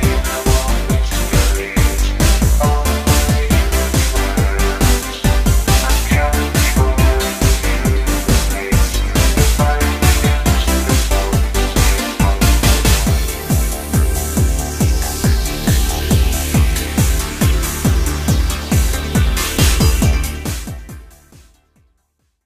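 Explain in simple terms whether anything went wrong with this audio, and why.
Nothing went wrong here: the only level change is a smooth fade-out from about 20 s to the end, an ordinary editing touch with no click or hard edge.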